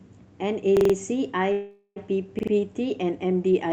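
Speech with two faults. A repeated buffer occurs at 0.77 to 0.94 s and again at 2.39 to 2.52 s. Each time a 43 ms piece replays, four extra times and then three, with hard joins, which fits a 2048-sample buffer arriving late. A call audio freeze runs from 1.52 to 1.98 s. The last sound is stretched into a fading buzz for about 0.44 s, then briefly drops to silence. Speech resumes where it stopped, with nothing lost, likely because the jitter buffer ran empty while packets were delayed.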